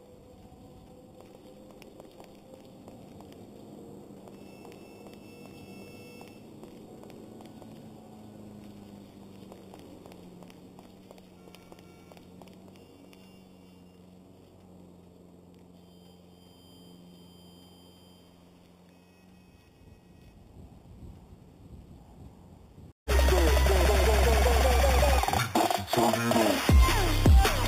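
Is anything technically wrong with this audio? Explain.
Yes. Imaging from sample-and-hold upsampling runs throughout: each sample was simply repeated, with no smoothing filter, in a rise that fits 8 kHz to 48 kHz. Mirrored spectrum copies, the lowest between 4 and 8 kHz at about -16 dB, add a bright metallic fizz that tracks the sound's level.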